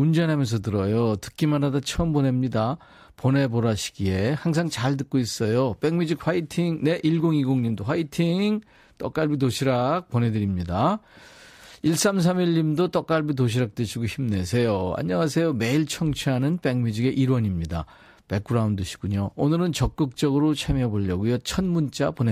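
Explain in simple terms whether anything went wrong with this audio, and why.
Nothing went wrong here, and the speech comes across just as it should with nothing to trip over anywhere along the way.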